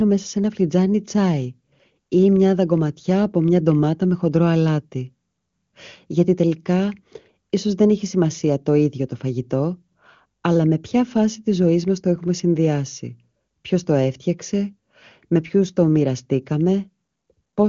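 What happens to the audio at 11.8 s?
At 11.8 s the speech runs on intact, with no dropout, glitch or added distortion, only the steady bandwidth limit of the wideband HD Voice channel, which carries nothing above about 7.3 kHz.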